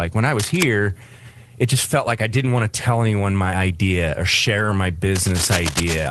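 From 0.39 to 0.63 s, just after "when i", cable scratch noise appears: dense, uneven rustling only slightly below the speech, likely from a worn cable or connector being moved. It returns from 5.15 to 6.07 s.

At 4.57 to 4.71 s, after "anyone my idea or", is a lost packet rebuilt from error correction. About 80 ms are replaced by low-bitrate backup copies, which fits four lost packets, so the audio sounds rougher and noisier. The call itself is limited to a 12 kHz band.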